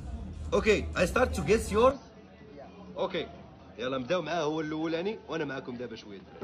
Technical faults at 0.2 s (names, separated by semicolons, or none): none